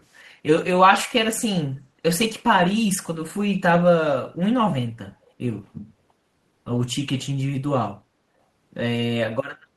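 Echo leak, from 0.10 to 0.23 s: a very faint, delayed copy of the speech trails the original by 343 ms and then vanishes. The likely cause is a far-end loudspeaker whose echo canceller let some microphone pickup return down the line.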